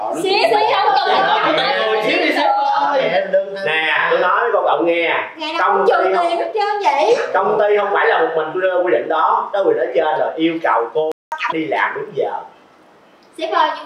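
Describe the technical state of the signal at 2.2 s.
At 2.2 s the signal is intact, with no dropout, distortion, glitch or other technical fault.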